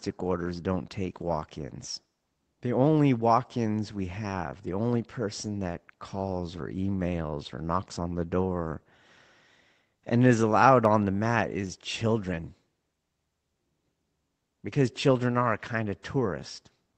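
No technical faults are audible anywhere in this speech.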